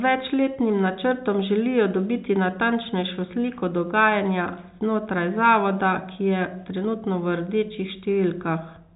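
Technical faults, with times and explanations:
No technical faults found; the speech carries the normal G.711 telephone band, with nothing heard above 3.8 kHz.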